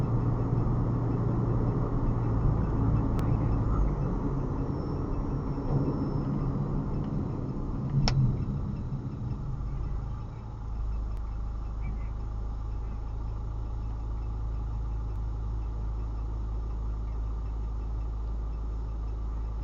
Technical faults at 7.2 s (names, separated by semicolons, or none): overlap between stream segments